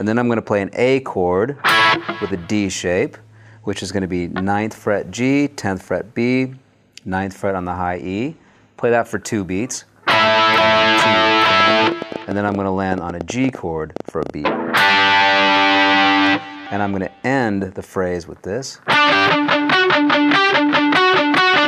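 From 11.50 to 14.31 s, a train of clicks sits on top of the sound. About thirty similar pops arrive unevenly, near 9.7 per second, well above the signal, likely from electrical interference.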